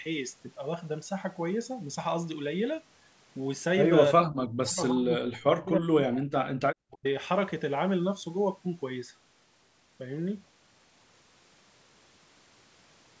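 Speech suppressed in double talk occurs from 4.12 to 6.41 s and again from 6.84 to 7.05 s. The speech sinks by up to about 40 dB, likely because an echo canceller mistook it for loudspeaker echo while the far side spoke.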